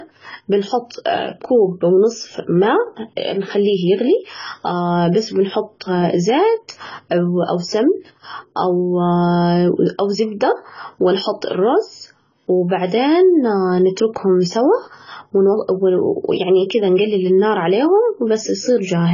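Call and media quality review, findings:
AAC compression, throughout. Speech dull and smeared; warbling fizz on sibilants; nothing above 7 kHz. Likely AAC-LC heavily quantised at a very low rate, consistent with about 16 kbps, band-limited to save bits. Spectrogram: hard ceiling at 7 kHz.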